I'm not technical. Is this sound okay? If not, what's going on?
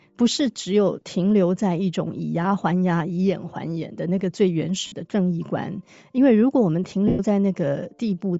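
No. Throughout, the speech has a grainy, breathy edge with its upper range thinned out, likely from Bluetooth LC3 compression squeezing the audio for a wireless link. Lost LE Audio frames cause two brief dropouts, at 4.87 to 4.92 s (about 50 ms) and 7.08 to 7.20 s (about 110 ms). Each gap is patched with a noisy smear of the preceding sound.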